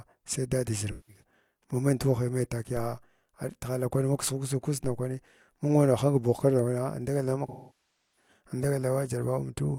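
At 0.91 to 1.23 s there's AAC frame loss with concealment: about 170 ms of speech goes missing, which fits four dropped frames. The decoder patches the gap from the last good spectrum, so you hear a brief smeared, noisy blur. Then come two DC steps, at 2.77 s and 4.84 s, where the waveform's zero line suddenly jumps. Each lands as a low thump while the speech carries on, and the offset drains away, like a roughly 2 Hz high-pass letting it settle. The bigger frame loss runs from 7.48 to 8.28 s, around 680 ms, which points to about sixteen lost frames. That's too long to hide, so the concealment decays toward silence and the audio fades back in afterwards.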